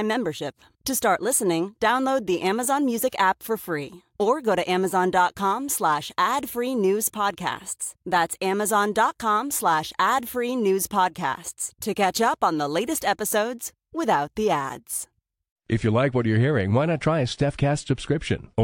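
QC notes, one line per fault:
No faults heard.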